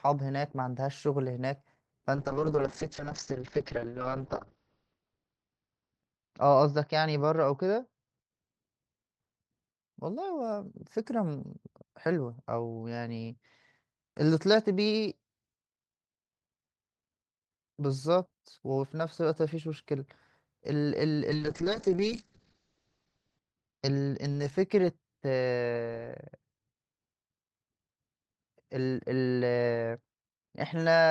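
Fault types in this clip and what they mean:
call bitrate drop: starved encoder makes speech coarse and muffled; spectrogram ceiling falls to 6 kHz at 2.16–8.65 s, and 8 kHz from 21.31 s.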